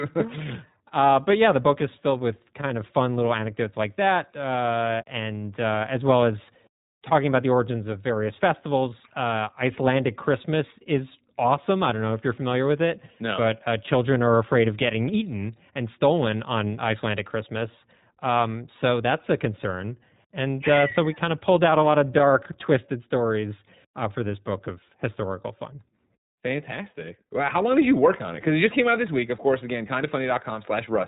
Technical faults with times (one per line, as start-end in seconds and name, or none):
0.00-31.07 iLBC codec